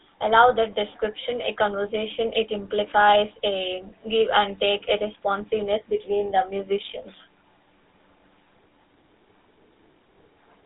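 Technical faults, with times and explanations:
Throughout, GSM full-rate codec: the speech is buzzy and gravelly, as the codec rebuilds the voice from a vocal-tract model driven by coarse pulses, which fits a 13 kbps GSM stream. A spectrogram shows a band of roughly 300 Hz to 3.7 kHz and nothing above 3.8 kHz.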